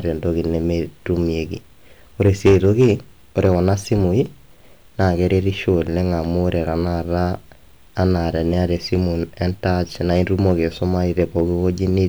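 Hard clipping hits the speech three times: 2.21 to 2.92 s, driven about 8 dB past the limit, then 3.38 to 3.93 s at about 4 dB, and 11.20 to 11.40 s at about 2 dB. Peaks too large for the stage are sliced flat. They show as squared-off waveform tops and as vertical streaks of added high harmonics on a spectrogram, heard as a harsh fuzz that thins to crackle.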